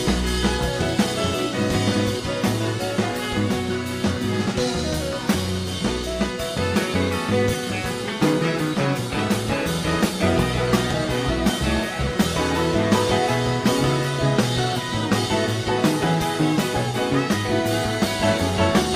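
There are no technical faults to describe in time order, because none occur anywhere in the audio.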